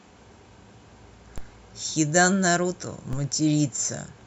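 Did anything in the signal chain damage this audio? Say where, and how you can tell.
Yes. A DC step at the converter: low thumps at 1.38 s and 3.13 s. The zero line jumps about -22 dBFS, then decays through a 5 Hz high-pass.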